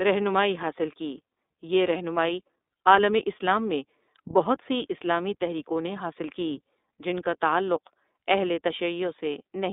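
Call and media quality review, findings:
Narrowband, slightly rough and synthetic speech for the whole clip, nothing above about 3.7 kHz and little below 250 Hz. Probable component: iLBC codec on the call leg. Each frame's excitation is coded independently, which fits the 30 ms, 13.33 kbps mode. That independent per-frame coding adds a plainly audible grainy texture, and the telephone-band filtering strips sibilance and low warmth.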